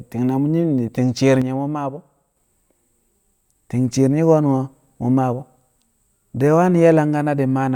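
A speech recording with a sudden gain jump. At 1.42 s the level drops by about 6 dB in a single step, speech and background noise together. It returns at 2.37 s. A gain setting applied without a ramp is the likely cause.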